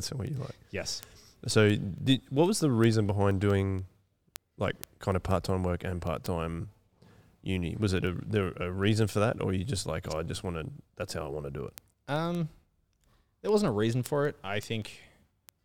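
Word clock ticks run from 0.18 to 15.58 s, sharp uneven clicks about ten per second. The receiver's unlocked clock drifts roughly 200 ppm, slipping one sample each time.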